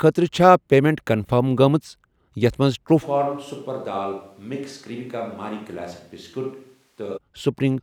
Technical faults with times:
3.04-7.16 switch to a distant microphone

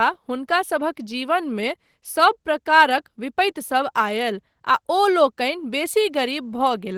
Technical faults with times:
0.00-6.97 Opus voice compression

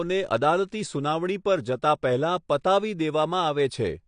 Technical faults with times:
0.00-4.08 AAC compression

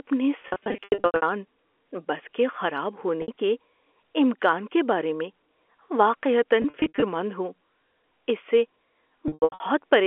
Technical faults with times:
0.42-1.22 packet loss with pitch repetition
3.22-3.28 packet loss with pitch repetition
6.62-7.02 packet loss with pitch repetition
9.28-9.60 packet loss with pitch repetition

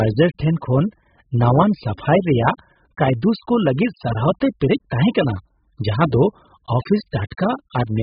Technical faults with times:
0.00-8.02 AAC compression

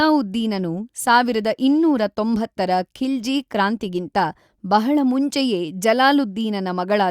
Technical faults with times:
none

